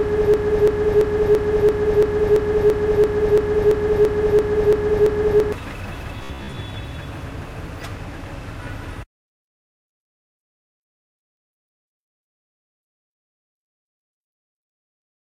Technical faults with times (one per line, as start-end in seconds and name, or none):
0.00-5.52 broken-record loop
6.24-6.57 robotic sound from repeated short buffers